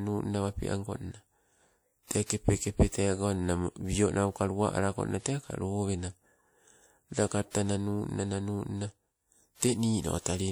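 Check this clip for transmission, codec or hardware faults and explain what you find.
The clip has one codec fault, pre-echo, which occurs twice in the speech. Pre-echo appears from 2.26 to 2.30 s and again from 7.51 to 7.55 s, spreading about 40 ms and 43 ms ahead of a sharp attack. The transform codec spreads quantisation noise across its whole block, so noise sized for the loud onset also fills the quiet stretch just before it. Each attack is preceded by a brief hiss and sounds softened and smeared.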